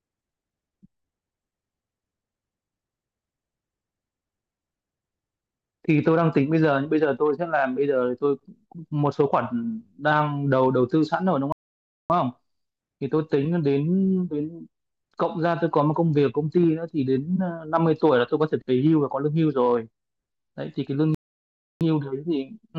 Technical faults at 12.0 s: playback stall

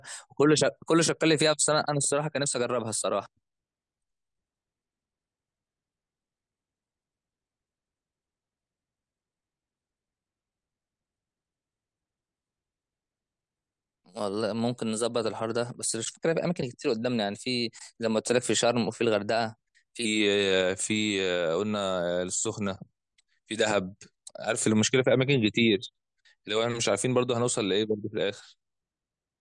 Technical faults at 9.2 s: wrong sample rate

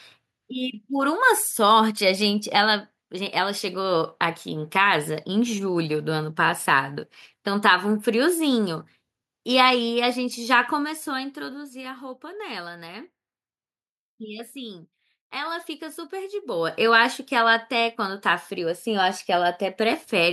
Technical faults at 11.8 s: none

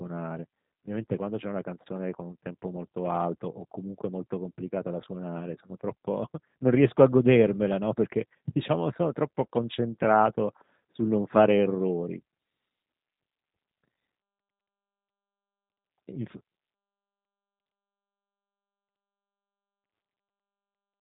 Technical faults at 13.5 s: G.729 codec

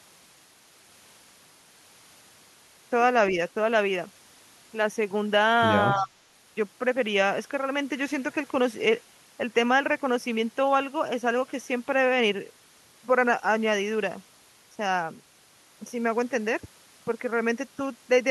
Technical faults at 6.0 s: speech suppressed in double talk; echo leak

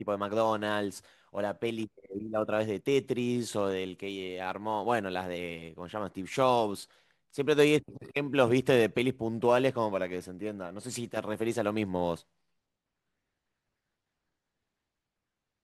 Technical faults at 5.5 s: sample clock jitter

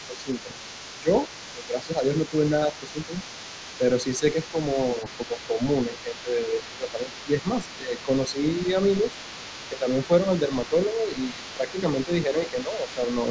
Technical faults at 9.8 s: other side's voice leaking through; speech suppressed in double talk

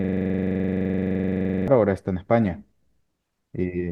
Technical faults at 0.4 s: system hang loop

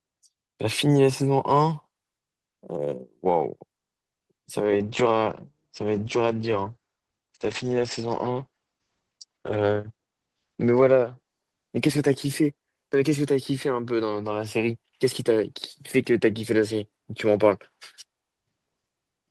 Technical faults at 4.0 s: call audio freeze; short concealed packet loss

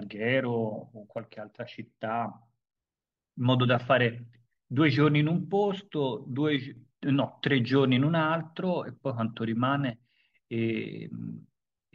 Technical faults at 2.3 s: one channel drops out

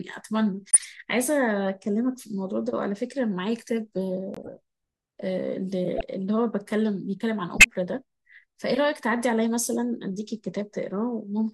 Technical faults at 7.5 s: corrupt frame decoded

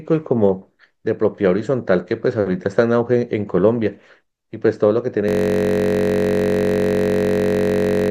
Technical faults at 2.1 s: none

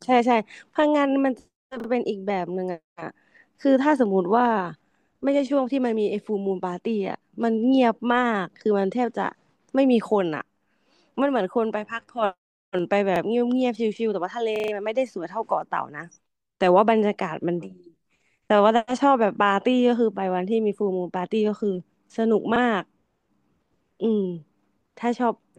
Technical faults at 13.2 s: repeated buffer

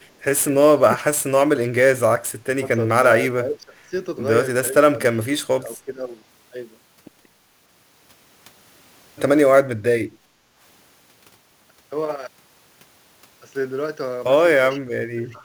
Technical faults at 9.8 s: sample clock jitter; speech suppressed in double talk

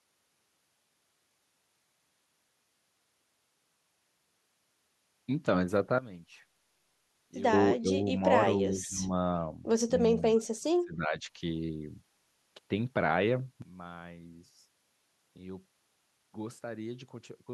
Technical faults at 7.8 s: speech suppressed in double talk

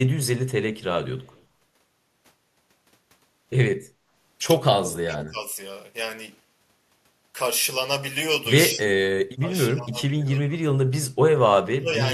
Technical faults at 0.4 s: none

